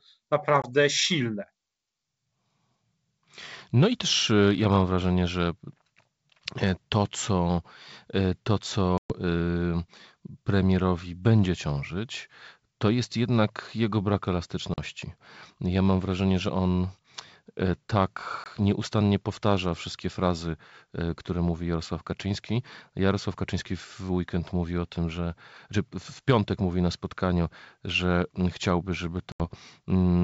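Speech carried over a wideband call, its clarity up to about 7 kHz pointing to G.722 at full rate. The fault is packet loss on an ADPCM call. Hard-edged silent gaps fall at 0.62 s (20 ms), 8.98 s (120 ms), 14.74 s (40 ms), 18.44 s (20 ms) and 29.32 s (80 ms). The longest fits several packets in a row. After each hole, the decoder's predictor and step size no longer match the sender's. Speech comes back slightly distorted, then settles.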